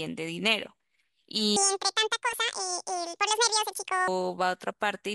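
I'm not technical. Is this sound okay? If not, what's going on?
No. From 1.56 to 4.08 seconds there's a section at the wrong speed: the speech suddenly plays about twice as fast, so it sounds hurried and squeaky, roughly ten semitones higher, then snaps back to normal. This is likely from an editor or player using the wrong clock for that stretch. Unlike a pitch effect alone, both the speed and the pitch jump together, so the talking gets faster as well as higher.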